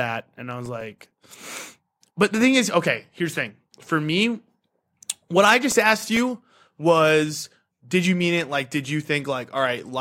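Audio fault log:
0.51–1.26 s, CD scratch ticks: six short ticks, the longest a few milliseconds, where a scratch defeats error correction on each turn of the disc.
5.57–6.32 s, CD scratch ticks: another six brief ticks just before "was did you mean", as the player patches unrecoverable samples once per rotation.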